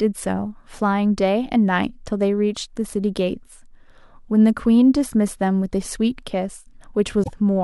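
A speech clip with one fault near the end. From 7.20 to 7.29 s there is damaged data in the compressed stream. It sounds like a short garbled burst. The decoder misreads the corrupted frames, loses sync, and searches for the next valid frame header.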